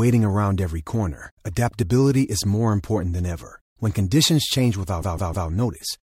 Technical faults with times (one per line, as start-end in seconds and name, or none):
5.00-5.47 repeated frames